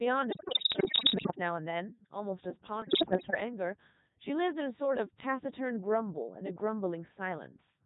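The whole clip has passed through the Codec 2 vocoder, and the damage is heavy. The decoder rebuilds the speech from sine waves. It uses only pitch, voicing, energy and a rough spectral envelope, so the original waveform is gone. The voice sounds robotic and buzzy throughout. Its synthetic texture fits the top 3.2 kbit/s mode.

From 0.32 to 1.35 s, bit errors on digital voice radio break up the speech. Corrupted bits reach a vocoder where each one steers a whole frame's pitch, level, voicing or spectrum. Here the errors are dense, about one bit in five. The voice leaps in pitch and loudness and turns into warbles and bleeps. A second burst follows from 2.82 to 3.40 s. It is milder, with errors around seven percent.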